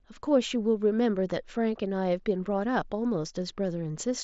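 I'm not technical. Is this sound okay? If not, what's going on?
Yes, there's no fault to hear in this recording.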